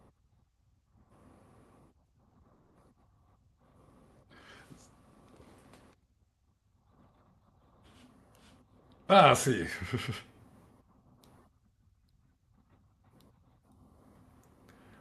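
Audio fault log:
2.29 to 2.45 s, short concealed packet loss: three brief holes, two back to back at 2.29 to 2.37 s and one at 2.41 to 2.45 s. Each was filled by extending the preceding sound, so the audio briefly smears and wobbles. On a spectrogram the spectrum goes frozen, with a small seam at each edge.
2.53 to 2.77 s, long network dropout: for about 0.22 s the sound turns into a stretched continuation that fades without reaching silence, likely because audio stopped arriving and the receiver filled the gap. The waveform shows a repetitive, decaying envelope, and the spectrogram shows blurred, frozen bands until the real audio resumes.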